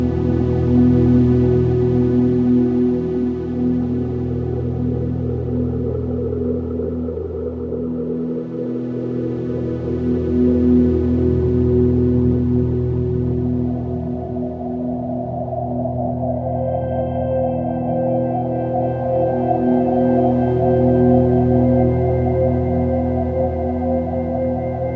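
No technical faults can be heard anywhere in this recording of sounds.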